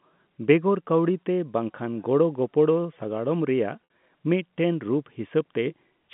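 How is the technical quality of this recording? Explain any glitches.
One dropout affects the recording, at 3.84 to 3.90 s, heard over the narrow telephone band of the G.711 line, which runs from about 150 Hz to 3.6 kHz.

At 3.84 s there is packet loss with pitch repetition lasting 60 ms, which fits three 20 ms packets going missing. To cover the hole, the receiver loops the last pitch period it received and attenuates the copies across the gap. The sound is a brief held, buzzy tone that decays before the speech resumes at 3.90 s.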